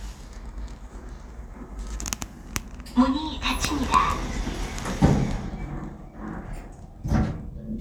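Everyday sounds, with no technical faults audible anywhere in the recording.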